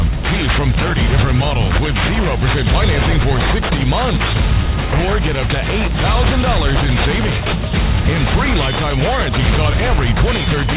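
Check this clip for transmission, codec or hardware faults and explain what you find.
One fault runs throughout: aliasing. The rate was cut without filtering, as if to 8 kHz, so content above 4 kHz folds back as strong gritty, metallic tones, unlike band-limiting's clean dullness.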